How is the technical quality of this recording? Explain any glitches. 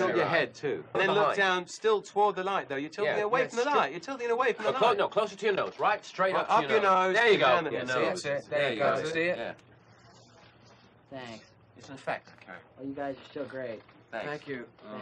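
Nothing stood out on listening to this recording, and there are no glitches to explain.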